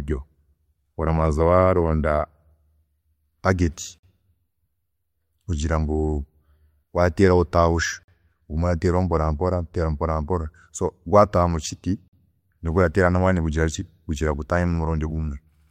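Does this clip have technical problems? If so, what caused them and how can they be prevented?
Yes. A gap between chunks occurs at 3.98 s, 8.03 s and 12.08 s: hard-edged silences of about 48 ms each, spaced 4 s apart. The sound arrives in 4-second chunks and silence is inserted at each join, interrupting the speech without losing any of it. Preventing this requires gapless joining, where each chunk is queued before the previous one ends and any padding is trimmed at the boundaries.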